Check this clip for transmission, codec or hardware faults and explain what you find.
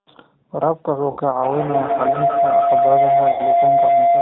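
Three faults are present: codec damage throughout, two short dropouts, and a building howl.

G.729 codec, throughout: speech is rebuilt at 8 kbit/s from a vocal tract filter and sparse pulses, so it sounds rough and synthetic, with nothing above 4 kHz.

VoIP packet loss concealed by the speech codec, at 1.11 to 1.19 s and 3.32 to 3.43 s: about 60 ms went missing each time, which fits two lost packets. The decoder stretched its last pitch and filter into a fading sound, and the speech stays weakened briefly afterwards.

Feedback howl, from 1.43 s to the end: two devices in one room formed a microphone-to-loudspeaker loop with gain above unity. A tone around 700 Hz grows, with a loop delay of roughly 150 ms, peaking about 5 dB above the speech.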